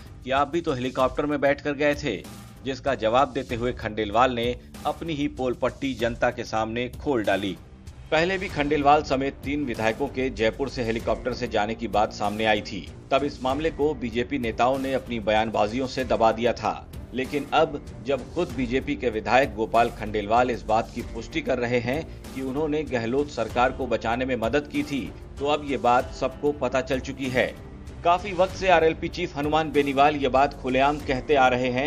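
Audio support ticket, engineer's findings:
Nothing turned up on this one: no dropouts, clicks, glitches or level jumps anywhere in the recording, so there's nothing to chase here.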